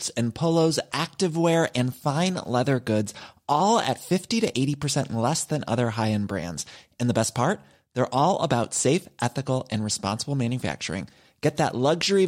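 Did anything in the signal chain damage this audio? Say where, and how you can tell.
No, nothing in the signal chain damaged this speech.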